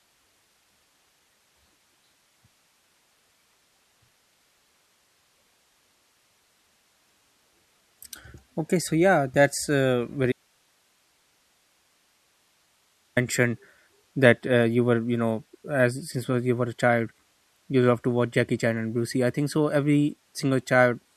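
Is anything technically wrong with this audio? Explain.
Yes, there's an audio dropout to a faint residue. Right after "so yeah that's uh", at 10.32 s, the speech cuts out abruptly and stays gone until 13.17 s, about 2.8 seconds. The gap isn't silent. There's hiss sitting somewhere around 45 dB below the speech level. That points to the signal feed most likely being lost while the rest of the chain stayed live, so you hear its noise floor instead of a clean pause or fade.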